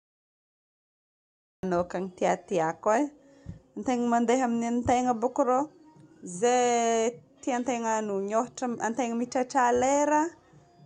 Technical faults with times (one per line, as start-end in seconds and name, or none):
0.00-1.63 cut-off start